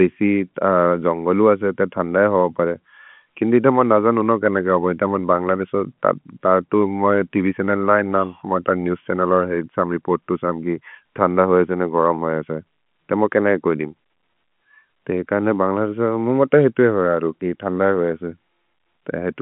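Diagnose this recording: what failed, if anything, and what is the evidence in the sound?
Nothing in this recording failed.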